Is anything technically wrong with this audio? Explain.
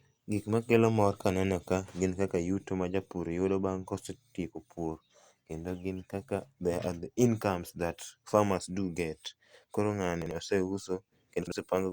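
Yes. Chunks out of order occur twice, at 10.22–10.31 s and 11.42–11.52 s. In each, one block of roughly 46 ms plays one slot late, after the block that should follow it, so the speech jumbles briefly, with three hard joins. On a spectrogram this shows as thin vertical lines where the harmonic tracks jump. In the waveform the segments no longer meet smoothly.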